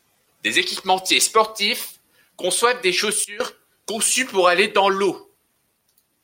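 At 3.24 s, right after "équipementiers sportifs conçoivent des", the level drops by about 18 dB in a single step and stays down until 3.40 s, recovering just as abruptly before "conçues pour aller dans". This is a sudden gain jump, most likely a digital gain setting applied without any ramp. Unlike a dropout, the sound never vanishes, and unlike compressor pumping, there is no gradual release: speech and background noise fall and return together.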